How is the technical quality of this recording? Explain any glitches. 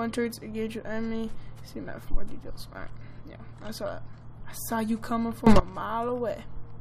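The recording has one clear glitch: a sudden gain jump from 5.47 to 5.60 s. For that short stretch the level rises by about 18 dB in a single step, with no fade in or out, and the background noise rises with the sound itself before both drop back. The step change likely comes from a gain setting or bit shift applied abruptly rather than ramped, and the hard edges can give an audible click.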